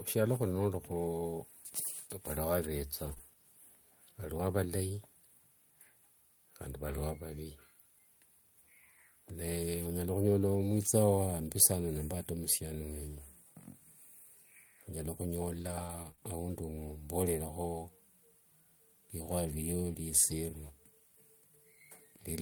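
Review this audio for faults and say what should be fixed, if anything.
From 3.05 to 3.11 s there is a lost packet rebuilt from error correction. About 40 ms, which fits two separate lost packets, was replaced by the low-bitrate copies carried in the following packets. There is no gap, but that stretch sounds rougher and noisier than the surrounding speech.

Right after this, two short concealed packet losses follow back to back, at 3.13 to 3.18 s and 3.18 to 3.21 s. Each is a 20 ms hole, filled for 24 ms and 16 ms by extending the preceding sound before crossfading into real audio. The result is a brief smear or wobble.

From 15.59 to 16.30 s there is repeated packet loss, which gives a robotic sound. Three gaps, the longest 24 ms, were patched by continuing the last sound, about 9% of the span in all. Roughly a third of a second more was rebuilt from error-correction copies, making the passage choppy.

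To prevent this, stabilise the network path and enlarge the adaptive jitter buffer so late packets arrive in time, and keep in-band FEC enabled with a loss-percentage setting matched to the observed loss.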